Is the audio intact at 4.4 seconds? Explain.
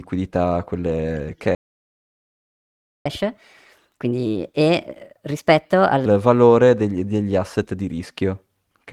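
No. At 4.4 s the speech is inside a catch-up at higher speed from 3.06 to 6.06 s, ending just before "valore degli degli asset". After a stall, the player resamples its backlog at 1.25× speed, so speech runs fast and pitch rises by roughly four semitones until normal playback resumes.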